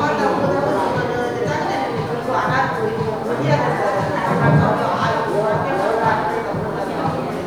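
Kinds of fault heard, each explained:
No kinds of fault are heard in this clip.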